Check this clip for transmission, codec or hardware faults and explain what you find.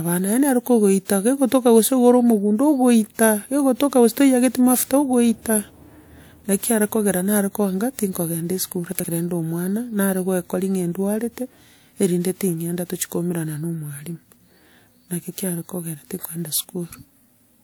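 There's one fault, chunks out of order, between 8.92 and 9.04 s. A 40 ms piece of the speech turns up two chunks late, playing after the material that should follow it. Nothing's missing, but that brief stretch sounds jumbled.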